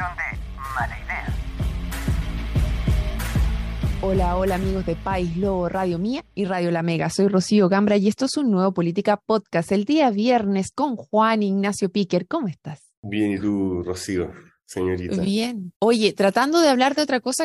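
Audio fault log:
13.96–17.44 s, pre-emphasis left on: for the last few seconds the top end suddenly jumps up, with everything above a few kHz pushed hard and 10 kHz sitting about 11 dB hotter than 1 kHz. The shape matches a 50 µs FM emphasis curve that boosted the treble for transmission but never got its matching de-emphasis cut on the way back, so this stretch comes across thin, glassy and fizzy, with sharp, spitty sibilance.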